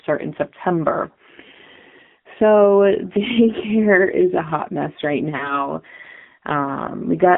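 Throughout, the speech carries the AMR narrowband mobile codec. The band is limited to roughly 150 Hz to 3.5 kHz, and the voice has a plainly buzzy, synthetic edge, which points to a low mode near 7.4 kbps. A simple telephone filter would dull the sound without that modelled roughness.

From 5.36 s to 5.69 s come lost AMR speech frames. About 40 ms of speech went missing, which fits two 20 ms frames failing their checks. The decoder held the last pitch and vocal tract settings at falling gain, so the sound smears and fades rather than cutting to a hard silent gap, and then comes back rough.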